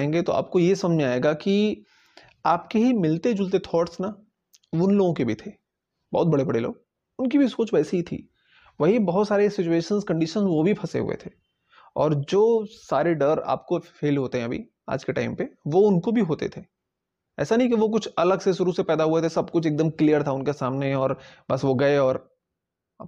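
No technical faults are audible anywhere in the clip.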